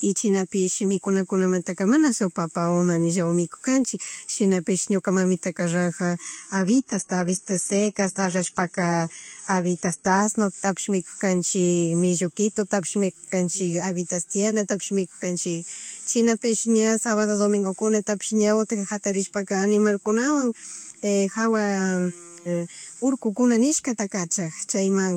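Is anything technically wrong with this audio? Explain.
Yes. From 6.22 to 10.22 s, just after "shinapish ñuka mamitaka raja", the speech drops abruptly to an adaptive stream at a lower bitrate. The player switched to a leaner encoding when throughput fell, which fits a move from about 96 kbit/s AAC to a roughly 16 kbit/s HE-AAC stream. Treble is cut off, and codec artefacts rise. A spectrogram shows a flat ceiling at 11.8 kHz for those four seconds, starting and ending sharply. The waveform shows no gap.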